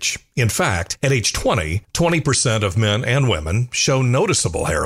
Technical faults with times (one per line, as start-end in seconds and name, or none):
none